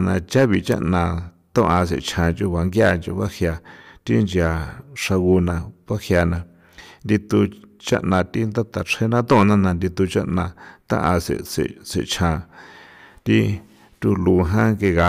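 Hard clipping runs through the whole speech clip: driven about 9 dB too hot, peaks are sliced flat, giving crackle only on loud moments, unlike smooth saturation.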